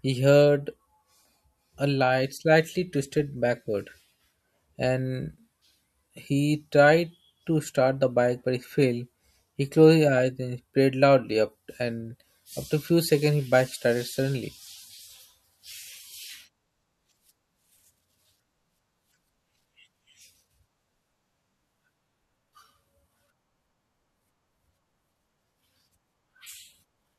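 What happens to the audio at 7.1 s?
Nothing goes wrong at 7.1 s; the speech runs through that moment intact, with no dropout, click or other fault.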